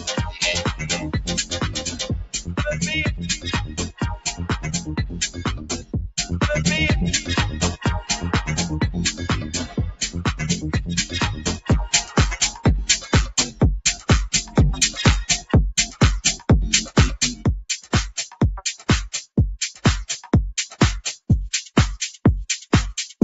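Across the whole clip the level pumps and flutters, with sustained parts and decays sinking by around 10 dB while sharp onsets survive. This is a noise suppressor applied to music or sounds: a speech-tuned suppressor treats steady tones and tails as noise and turns them down.

At 1.45 to 2.0 s, 2.23 to 2.57 s, 3.66 to 4.49 s, 4.78 to 6.11 s, 9.44 to 10.01 s and 11.35 to 11.66 s, the sound dips hard, by about 11, 15, 14, 14, 14 and 12 dB respectively, so held portions thin out and their decays are clipped short. Each is sound cut by the noise suppressor, which mistook this content for noise and pulled it further down than the rest. Through all of this the call path holds the audio to an 8 kHz band.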